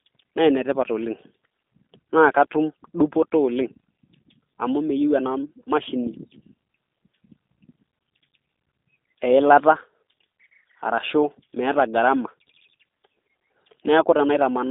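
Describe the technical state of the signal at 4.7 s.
At 4.7 s the speech carries G.729 codec damage, present throughout: a narrow 250 Hz to 3.7 kHz line band, nothing above 3.8 kHz, and a rough, synthetic buzz from pulse-rebuilt excitation, consistent with an 8 kbit/s coder. Plain band-limiting alone would sound dull but clean.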